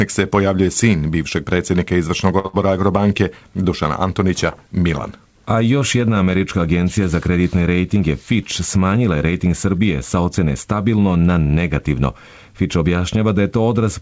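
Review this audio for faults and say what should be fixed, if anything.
A short stall from a late packet at 2.39 to 2.47 s holds the last sound for 52 ms until the packet arrives. Nothing is skipped, which is what separates it from the loss that follows. The fix is a slightly deeper jitter buffer target, so a late packet still arrives before playout needs it.

A burst of packet loss follows at 2.47 to 2.56 s. About 60 ms is gone, covered by a fading continuation, and the audio resumes further ahead instead of where it stopped. Forward error correction or redundant packets would let the receiver rebuild the lost audio.

A jitter buffer speed-up runs from 8.00 to 8.77 s at 106% speed, trimming about 50 ms in small pitch-period cuts. Pitch stays steady, unlike a resampling error. Gentler delay reduction, spread over a longer stretch, would keep the hurried feel from being audible.

The G.722 call path has nothing above 8 kHz, which fits a 64 kbps wideband call.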